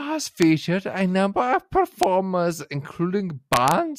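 Speech with integer overflow cracks at 0.42 s, 2.03 s and 3.53 to 3.71 s, where peaks wrapped to the opposite sign. That makes them sharper than clipping's flattened tops.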